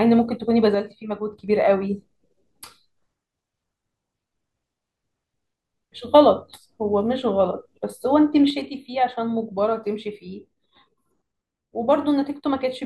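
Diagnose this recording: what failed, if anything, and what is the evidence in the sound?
A stereo channel dropped out, likely from an intermittent connection in the analogue wiring, so one side of the feed went silent. From 0.75 to 1.48 s, and again from 8.50 s to the end of the clip, the speech falls abruptly by about 6 dB. That is the loss expected when content shared by both channels is summed to mono with one side missing. Anything carried only by the lost channel vanishes during those spans.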